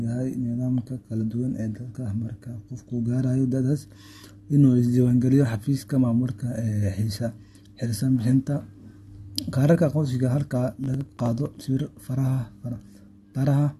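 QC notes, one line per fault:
10.84 to 11.68 s, processor overload crackle: a gritty, tearing crackle rides on the speech for most of a second. The processor kept missing its deadlines on very short buffers, under a millisecond each, and dropped some forty of them. Each skip left a hard-edged gap that crackles.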